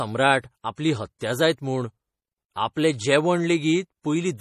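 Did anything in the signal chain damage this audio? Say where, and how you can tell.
Yes. The whole clip has a hard ceiling at 14.7 kHz and plainly audible watery, swirly treble, with sibilants going metallic. That's likely MP3 compression at the codec stage, with the fixed cutoff and dropped weak lines fitting a starved bitrate around 40 kbps.

There's also pre-echo from the same codec stage between 1.18 and 1.21 s. A short smear of hiss runs about 27 ms ahead of a sharp onset, because the transform block spread its quantisation noise back into the quiet moment before the attack.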